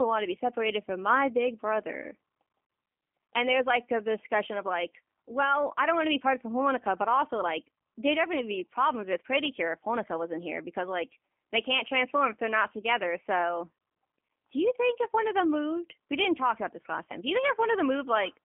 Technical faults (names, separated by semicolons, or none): G.729 codec